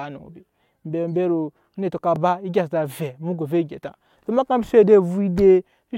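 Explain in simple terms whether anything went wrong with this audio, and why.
Yes, something went wrong: overlapping chunks. The speech was handled in pieces of about 2.5 seconds, and one piece began before the previous one had finished. At 2.16 s, right after "onetɔ ka", a 25 ms sliver plays twice, heard as a brief click or stutter.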